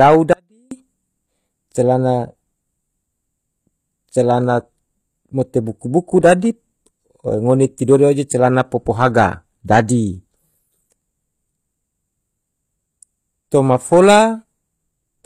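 From 0.33 to 0.71 s the speech drops abruptly to a faint residue roughly 40 dB down. This is an audio dropout, likely a break upstream, and its instant edges set it apart from a natural pause or fade.

Throughout, the treble is rebuilt rather than real, with gritty, metallic s sounds and nothing above 14.9 kHz. This is likely HE-AAC compression consistent with about 24 kbps, distinguished from simple low-pass filtering by the mismatched upper harmonics.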